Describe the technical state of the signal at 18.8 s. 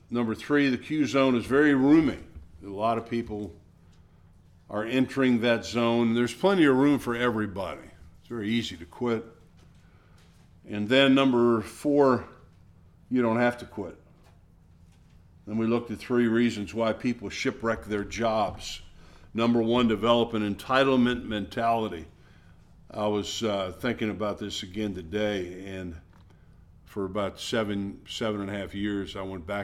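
Around 18.8 s the signal is intact, with no audible fault at that point.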